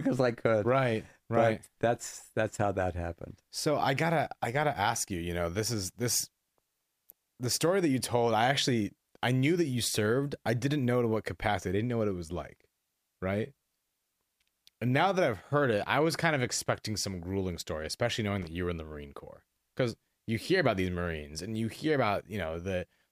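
A worn or dirty contact in the signal chain briefly made and broke connection, producing loose connector crackle in this speech clip from 18.42 to 18.47 s. For about 50 ms the signal is chopped into an irregular burst of scratchy crackle, with clicks where the contact snaps open and shut.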